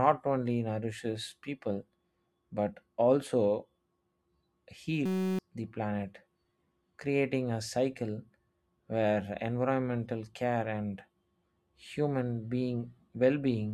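From 5.06 to 5.39 s, a system hang loop replaces the speech with a steady 188 Hz buzz. One 5.33 ms slice repeats while the system is frozen.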